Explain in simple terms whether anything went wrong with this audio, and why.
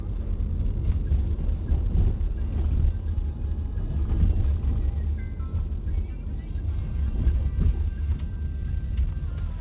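Nothing went wrong: the sound came through an ordinary call path using the standard G.711 phone codec, which keeps nothing above 4 kHz, so any dullness in the top end is how that path is built, not a fault.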